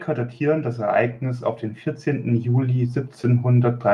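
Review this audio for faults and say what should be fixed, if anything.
Automatic gain rising twice, 0.38 to 1.51 s by about 5 dB and 2.03 to 3.11 s by about 4 dB: the AGC hears quiet input and ramps up, swelling voice and background together. Fix it by setting a fixed input gain and turning AGC off.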